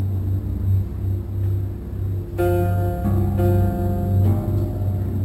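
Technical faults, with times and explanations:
Throughout, imaging from sample-and-hold upsampling: a faint, bright metallic fizz sits above the sound and rises and falls with it, with the lowest mirrored band lying between 6 and 12 kHz, about 31 dB below the signal. Each original sample was simply held and repeated at the higher rate with no smoothing filter, so the spectrum folds back around multiples of the old rate, which points to an original rate near 12 kHz.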